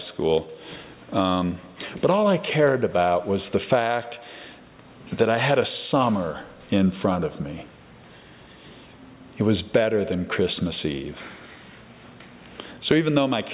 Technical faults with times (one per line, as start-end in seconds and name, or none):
none